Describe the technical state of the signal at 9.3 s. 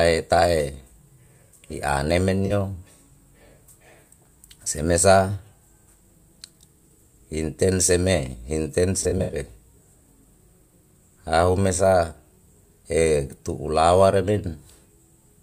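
At 9.3 s the signal is inside a burst of AAC frame loss with concealment, running from 9.03 to 9.36 s. About 150 ms of audio is missing, scattered over roughly 300 ms in gaps of up to about 70 ms. The decoder patches each gap by reusing the last good spectrum, which gives brief smeared, noisy, phasey patches. On a spectrogram these show as blurred, harmonically flattened blocks. The waveform shows irregular envelope patches.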